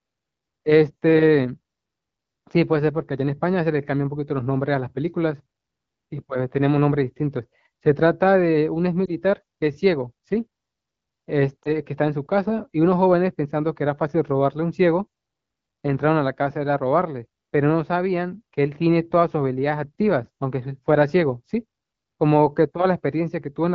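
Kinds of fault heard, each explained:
Lost AMR speech frames: Radio errors corrupted a speech frame, so the decoder filled the gap by repeating the last good settings at lower gain. It happens twice, around 9.1 s and 11.6 s. Each is a brief dip or warble lasting about one frame.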